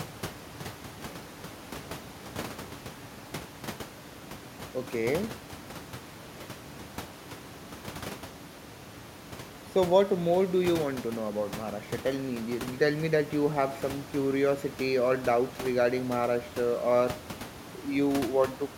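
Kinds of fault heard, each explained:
No technical faults are heard.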